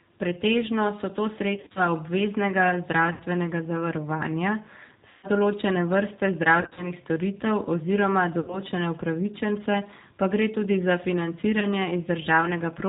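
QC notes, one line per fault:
throughout: G.729 codec. The speech is band-limited with nothing above 4 kHz, and has a rough, slightly synthetic grain, which fits an 8 kbit/s G.729A stream. The decoder rebuilds each 10 ms frame from a vocal tract filter, a pitch predictor and a few pulses rather than the real waveform. The fine detail between those pulses is lost, so the codec damage is plainly audible.
1.56–1.80 s, 3.13–3.23 s, 5.10–5.27 s, 6.61–6.93 s, 8.40–8.60 s, 11.60–11.69 s: VoIP packet loss concealed by the speech codec. The decoder fills each gap by repeating its last pitch and filter at falling gain, so the speech smears into a fading buzzy tone or coloured noise. The longest gap is at 5.10 s, about 130 ms. The gaps at 1.56 s and 6.61 s are broken up, and each frame builds on the last, so the speech stays weak briefly after each gap ends.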